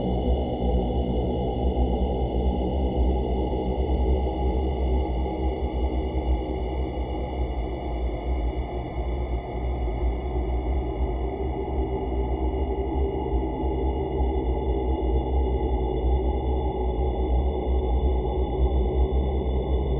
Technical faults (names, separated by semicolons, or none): none